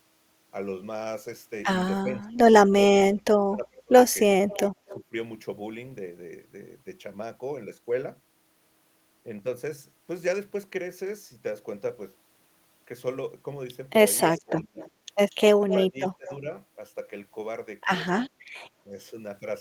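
From 2.01 to 3.93 s the speech ducks hard, by about 30 dB at its worst, for roughly a second and a half in total. That's speech suppressed in double talk, most likely because both ends were talking at once and the echo canceller, unable to tell its own talker from loudspeaker echo, turned everything down. At 4.48 to 4.97 s a faint copy of the voice trails the original by 244 ms, about 20 dB down. That's echo leak, likely from a speakerphone whose canceller let part of its microphone pickup slip back. Right on top of it, 4.86 to 5.14 s, the voice dips again by about 15 dB. The longest echo leak runs from 14.19 to 16.36 s, a 234 ms delayed copy only about 10 dB below the speech. Inside that stretch the speech is also suppressed at 14.42 to 14.79 s (about 25 dB) and 15.81 to 16.47 s (about 20 dB), which makes it sound choppy. A brief echo scrap turns up again at 18.11 to 18.3 s, 234 ms late and about 15 dB down. 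Then a tiny dip of about 5 dB follows at 18.85 to 18.93 s.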